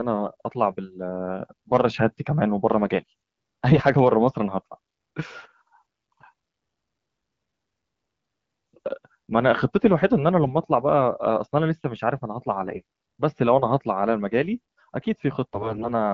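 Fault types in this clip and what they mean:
AMR bit errors: flipped low-priority bits slip past the frame checksum, so excitation pulses and fine pitch, gain and spectral values decode wrongly. Five brief bursts between 3.69 and 15.90 s turn hoarse and gargly, with smeared, noisy harmonics on the spectrogram and a roughly unchanged waveform envelope.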